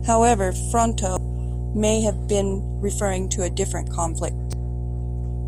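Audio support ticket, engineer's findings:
Mains hum across the whole clip, a steady 60 Hz tone with low harmonics, strong and sitting nearly level with the speech. Probable ground loop or a transformer close to the cabling coupling the power line straight into the signal path.

Damaged data in the compressed stream, two brief blips at 1.17 s, just before "may have been referring", and at 4.53 s. Decoder hit corrupted frames, lost sync and skipped ahead to the next header.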